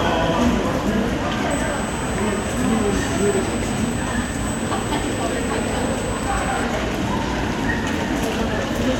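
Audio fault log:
1.51–6.64 s USB whine: a thin, steady tone fixed at 8 kHz sits roughly 15 dB below the sound for about 5.1 s, then stops. The pitch matches the 125-microsecond microframe rate of a USB bus, whose current draw leaks into the audio through shared power or ground. Mains hum sits low, at 50 or 60 Hz and its harmonics, and a switch-mode supply whine tends to wander in pitch. This tone holds exactly at 8 kHz.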